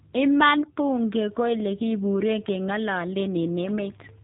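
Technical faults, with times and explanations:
Throughout, G.729 codec: nothing above 3.8 kHz, and the speech is rough and synthetic because it is rebuilt from a vocal tract model and sparse pulses, unlike a clean band limit; fits 8 kbit/s.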